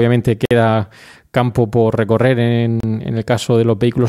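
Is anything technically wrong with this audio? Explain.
Yes. At 0.45 to 0.51 s and 2.80 to 2.84 s the speech drops to silence for about 53 ms and 31 ms, then resumes. These are likely Bluetooth stalls: interference delayed packets, the receiver's buffer emptied, and playback paused until retransmitted data arrived.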